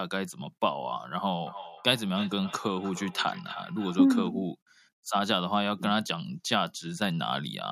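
It's a speech clip, and from 1.47 to 4.33 s there's feedback echo between two devices: each word comes back roughly 300 ms later, peaking at about 14 dB under the voice. Two devices in one room on the same call, each mic re-catching the other's playback, which neither canceller removes.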